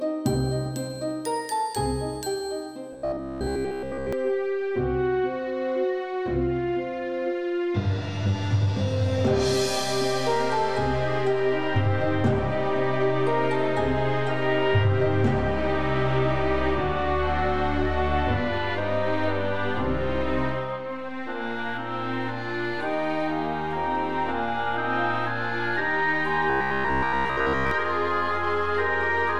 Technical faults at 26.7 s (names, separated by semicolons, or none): robotic sound from repeated short buffers